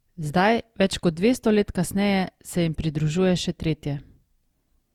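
A speech recording that has most likely suffered generation loss, having been decoded and re-encoded about four times through a lossy codec whose character points to Opus at around 64 kbit/s. Each pass quantised the signal again on a shifted frame grid, so the damage compounds across the whole clip: the speech sounds swirly and hollow, with smeared, softened consonant attacks, beyond what a single encode at that rate would leave, even though content still extends up to 20.2 kHz.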